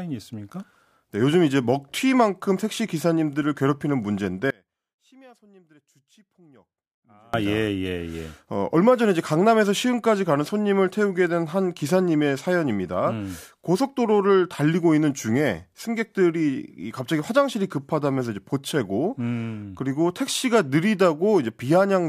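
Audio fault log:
4.50–7.34 s, audio dropout to a faint residue: the speech cuts out abruptly for about 2.8 s, leaving only a faint sound roughly 30 dB down rather than true silence. That points to the signal likely being lost upstream while the path after the break stayed live, so it's no natural pause.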